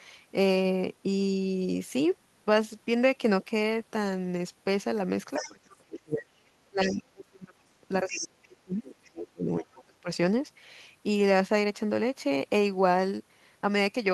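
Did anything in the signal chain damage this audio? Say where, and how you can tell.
Yes. The damage happens in call processing. A second voice leaks in under the talker in short scraps at 5.33 to 5.53 s, 5.7 to 5.76 s, 6.81 to 6.93 s, 8.1 to 8.47 s and 9.61 to 9.66 s. It sits roughly 10 to 30 dB below the speech. This is the other side's voice leaking through. The likely cause is an echo canceller that left part of the loudspeaker signal in the microphone feed.

The same stage also produces speech suppressed in double talk. The talker's level dips from 5.39 to 6.31 s, 6.51 to 7.7 s and 8.04 to 10.08 s. The deepest dips reach about 30 dB. These stretches overlap the leaked voice, so both sides were talking at once. The likely cause is the echo canceller failing to separate the talker from the echo and turning both down.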